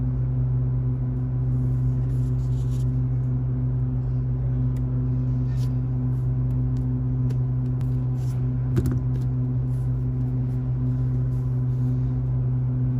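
At 7.81 s the audio has a CD skip: a shock or a surface flaw knocked the laser onto another turn of the disc's spiral, so playback mutes for only a few milliseconds before resuming from a different point on the track. The ear catches a small tick and an abrupt discontinuity in the sound. On a waveform this shows as a near-instant gap with mismatched edges. A spectrogram shows a thin vertical broadband line.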